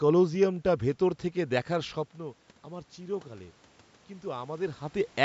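From 1.71 s to 4.86 s there's automatic gain rising. The talker moves away around two seconds and the speech drops by about 13 dB, so the AGC slowly winds up about 4 dB, lifting the room noise along with it.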